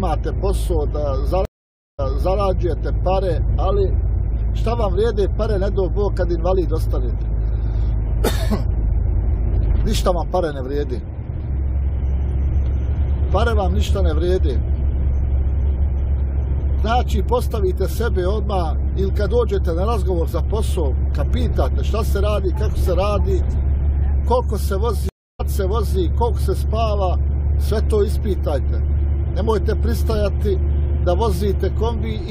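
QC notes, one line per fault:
1.45 to 2.38 s, stream reconnect: the feed drops out for 534 ms while the player loses its connection and rejoins, then a fresh decoder picks up mid-stream. The server resends a burst, so playback resumes 395 ms earlier than where it broke off, repeating a short stretch already heard, and the first frame fades in before the level settles.
25.09 to 25.41 s, stream reconnect: a second break, 304 ms of silence while the link is re-established. This time the restart lands ahead of the lost position, skipping roughly a third of a second of material, as a live feed does when the client rejoins at the current point. The new decoder starts cold, so the opening frame is held down or fades in.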